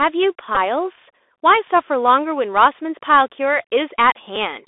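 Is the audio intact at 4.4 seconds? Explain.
No. At about 4.36 s a Bluetooth headset packet repeated: lost voice packets, likely two, were replaced by the previous packet's bits, leaving a brief tick rather than the sustained 267 Hz buzz of a longer run. Throughout, the Bluetooth CVSD headset codec limits the band to about 300 Hz to 3.6 kHz and adds granular hiss and scratchy sibilants, unlike the sudden brief tick.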